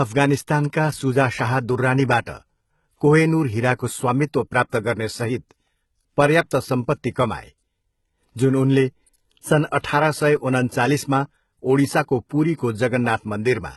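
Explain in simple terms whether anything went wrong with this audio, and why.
Three things went wrong, all during the speech.

The whole clip has heavy compression damage that sounds like HE-AAC compression, likely at a low setting. Nothing is present above about 11.8 kHz, and the top end that remains is not the original sound but a rebuilt copy of lower frequencies pushed upward. Because that copy does not line up with the real tones underneath, s sounds and other hissy consonants come across as gritty, metallic or lispy rather than crisp.

From 0.56 s to 13.55 s there are clock slip clicks: small ticks at a steady rhythm, roughly every half second, about twenty in all. The likely cause is two pieces of equipment each keeping their own time with nothing to keep them in step. Whenever the gap between them adds up to a whole sample, one sample is dropped or repeated, and each of those jumps makes a tick. 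They are easiest to hear on loud, sustained sounds and cannot be heard in pauses.

Pre-echo shows up four times: from 2.25 to 2.27 s, from 4.69 to 4.73 s, at 12.29 s and at 12.58 s. It lasts between 14 and 37 ms. Just before a sharp onset, a short burst of hiss appears and the attack itself sounds softened. The compression works on short blocks of sound and spreads its noise evenly across each block, so the noise that belongs to the loud attack also fills the quiet moment just before it.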